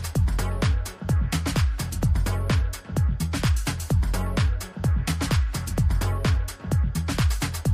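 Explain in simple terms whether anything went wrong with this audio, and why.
Nothing went wrong with this audio that a listener can pick out. The sound holds together the whole way, with nothing at any moment that interrupts or disturbs it.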